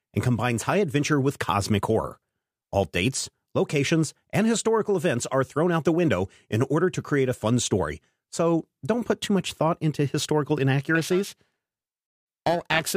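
From 10.95 s, just after "much thought into historical", to the end at 12.96 s, the speech carries periodic clock jitter. Interference near 1 kHz wobbles the converter's sampling clock. Each frequency in the voice gains sidebands about 1 kHz either side. Bright sounds turn rough and metallic.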